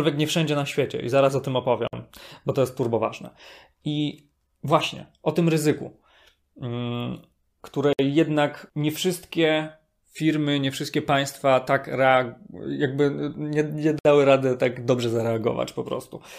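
At 1.88 s, after "i zaraz o tym", the speech drops out for about 54 ms, then resumes at "bo to jest". Identical holes of about 60 ms follow at 7.93 s, before "jednak nie wszystkie", and at 13.99 s, after "nie nie". These are gaps at joins of encoded pieces, spaced 6 s apart. Each piece carries its encoder's start-up silence and end padding, left untrimmed. The edges are smeared by the codec.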